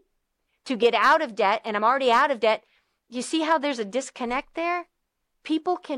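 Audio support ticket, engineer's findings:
No faults found in clip.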